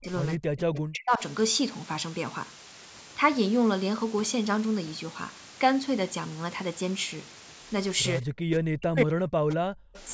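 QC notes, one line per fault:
Throughout: low bit depth with dither. The audio is carried at only 6 bits, and dither was added before each sample was rounded, so the coarse rounding error is spread into a steady, even white hiss rather than grainy distortion. The hiss sits at about 15 dB below the signal, which is loud enough to stay plainly audible under every passage, including the band up to the 8 kHz top of this call audio.
0.0–0.08 s, 0.36–1.22 s and 8.21–9.86 s: speech suppressed in double talk. In each of these stretches the speech dips sharply or breaks off in pieces. The drop is about 30 dB in the first brief moment and about 40 dB in the later two, where most of the span is affected. This is likely the echo canceller failing to separate its own talker from loudspeaker echo while both sides spoke, so it pulled everything down.
0.74–0.78 s and 9.94–10.0 s: echo leak. A faint scrap of delayed speech surfaces in each spot. 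It trails the original by 193 ms in the first and 212 ms in the second, and sits about 20 dB and about 25 dB below the main speech respectively. The likely cause is a loudspeaker on one side whose echo canceller let part of what its microphone picked up pass back into the call.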